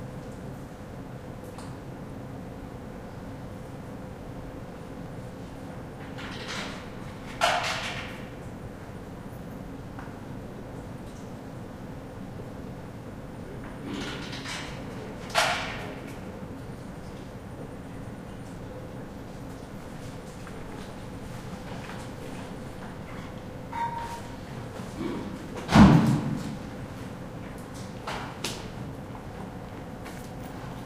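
Dropped buffers (overrun) at 5.06 s, 18.57 s and 22.46 s: at each point the sound jumps abruptly forward with no gap of silence, losing a sliver of roughly 20 ms, 30 ms and 10 ms respectively. The likely cause is the recording software falling behind, so the hardware overwrote a block of samples before it was collected, and the audio on either side of the missing piece was spliced straight together.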